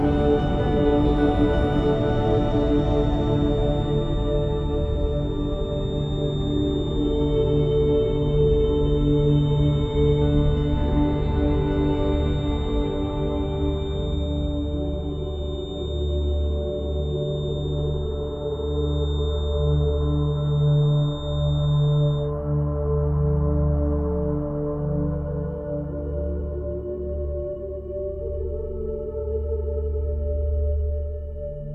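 A feedback whistle runs from 0.0 to 22.34 s: a thin, steady 3.6 kHz tone sitting well below the main sound and swelling and fading slowly in level. The likely cause is a loudspeaker-to-microphone loop held just short of runaway feedback.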